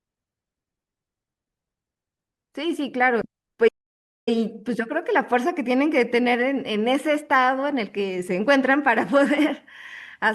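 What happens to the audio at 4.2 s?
A playback stall runs from 3.68 to 4.29 s, so 4.2 s falls inside it. The speech cuts off mid-flow into roughly 0.59 s of silence, likely because the player ran short of data or its thread was blocked, before the audio resumes.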